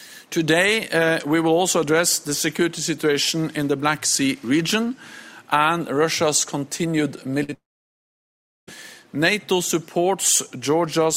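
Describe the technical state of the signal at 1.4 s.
At 1.4 s the signal is intact, with no dropout, clipping, glitch or other fault to be heard at that moment.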